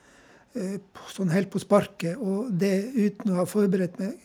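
A speech recording with no audible technical faults.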